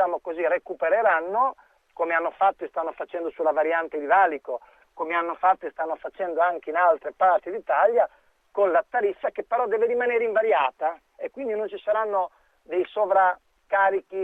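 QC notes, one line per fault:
Nothing stood out on listening; no faults were heard at any point.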